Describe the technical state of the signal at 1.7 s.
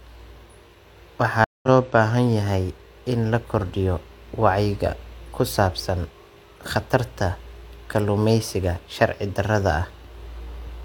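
At 1.7 s the speech has only just come back after a stream reconnect spanning 1.44 to 1.68 s. The connection dropped, leaving a 187 ms hole of silence, and a fresh decoder picked up mid-stream, resuming roughly a tenth of a second later in the material, so a small piece is skipped. The first frame or so fades in. On a waveform this is a flat gap followed by a ramping envelope. A spectrogram shows a blank vertical band with an abrupt restart.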